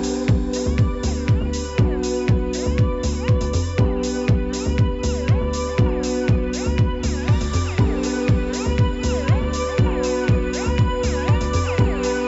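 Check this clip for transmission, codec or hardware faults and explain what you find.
The signal shows only the usual shaping of call microphone processing, with the lowest bass removed by its high-pass filter and no content above 8 kHz, and nothing in it points to a fault.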